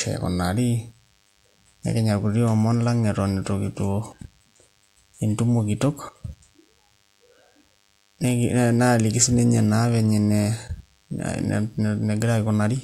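It's a speech clip with DECT cordless phone buzz running the whole way through: a thin, steady 100 Hz buzz full of harmonics, sitting well down, roughly 40 dB under the voice. A nearby DECT handset or base fires a radio burst every 10 ms, and the audio circuitry rectifies it into this buzz.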